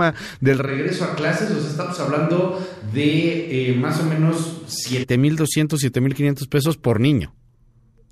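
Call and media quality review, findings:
Switch to a distant microphone, 0.69 to 5.02 s. Speech goes roomy and hollow with thinner bass, cutting in abruptly and snapping back just as abruptly. Level holds about steady, with room noise sitting roughly 35 dB under the speech. Likely cause: the close mic dropped out and the feed fell back to a far pickup such as a camera mic, which hears more room reflection and less low end.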